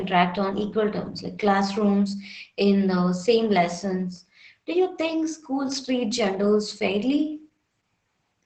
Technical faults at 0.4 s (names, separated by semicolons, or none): Opus voice compression